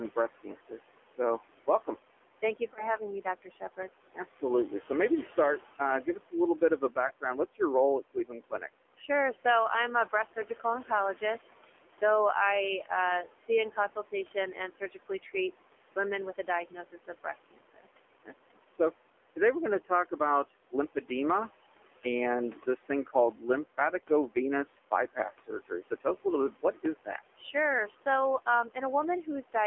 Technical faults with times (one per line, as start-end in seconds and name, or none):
0.00-29.66 noise suppressor artifacts
0.00-29.66 AMR narrowband mobile codec
0.16-9.09 speech cut by the noise suppressor
2.74-2.90 lost AMR speech frames
7.08-7.12 lost AMR speech frames
22.04-29.55 speech cut by the noise suppressor